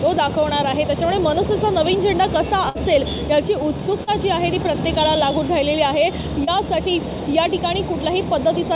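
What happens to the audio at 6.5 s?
Around 30 ms of the call's audio failed to reach the decoder in time at 6.44 s, producing a short concealed packet loss that ends at 6.50 s. The receiver covered roughly 28 ms of the gap by extending the last sound it had, then crossfaded back into the real signal. At this point you hear a brief smear or wobble in the sound, heard through the G.711 mu-law path's band limit of 4 kHz.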